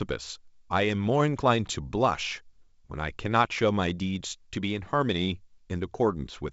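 No technical faults can be heard in the speech, which comes through G.722 wideband telephone coding at 64 kbit/s with nothing above about 7.7 kHz.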